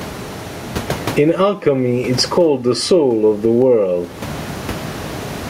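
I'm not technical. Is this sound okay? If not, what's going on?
No. Throughout the speech there is gain pumping: loud and soft parts end up closer in level, squashing everything flat, likely from the microphone level being set far too high.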